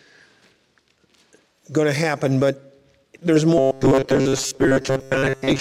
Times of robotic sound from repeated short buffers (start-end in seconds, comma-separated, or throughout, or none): 3.58-5.60